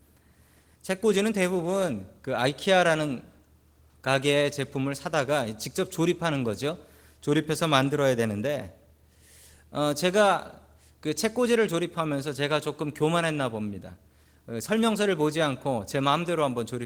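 No technical faults are audible anywhere in the recording.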